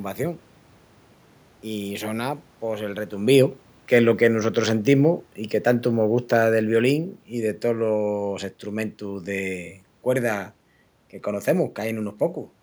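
Speech, with the automatic gain falling between 3.16 and 8.25 s. After "pos el", the control judges the input too loud or its background noise too strong. It lowers its gain by about 8 dB. Voice and room noise sink together until "estrumentus de cuerda que". The talker shifting around 3 s is natural, not a fault.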